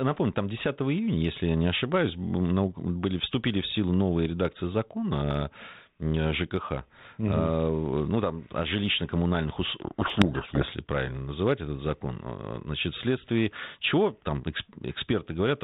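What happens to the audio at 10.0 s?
At 10.0 s the speech falls inside a codec payload misread lasting from 9.82 to 10.67 s, just before "правильно называть этот закон". The decoder takes the G.726 code words in the wrong bit order, so the speech is buried in harsh distortion until the packing agrees again.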